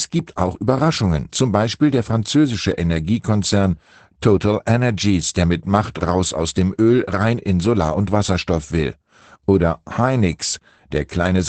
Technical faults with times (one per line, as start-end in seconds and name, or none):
0.00-11.49 Opus voice compression